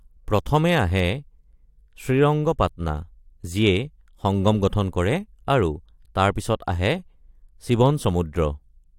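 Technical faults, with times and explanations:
No technical faults can be heard in this speech recording, and the signal comes through without any dropout, distortion or interruption.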